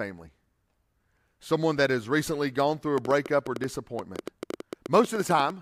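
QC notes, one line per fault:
2.98–5.51 s, train of clicks: right after "recently gone through a", a run of about twenty sharp ticks starts and keeps going to nearly the end, roughly 8.7 per second but spaced unevenly, so it sounds like a stuttering patter rather than a steady tick. They're loud, around 10 dB above the speech, and all share the same pop shape. Likely something external, like nearby equipment interference or a faulty connection or power supply, dropping pulses onto the signal.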